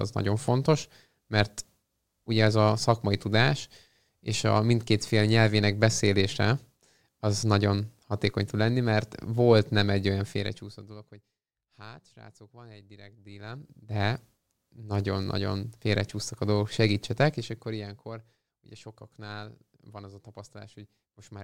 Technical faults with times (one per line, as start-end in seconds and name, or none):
13.21-14.04 zipper noise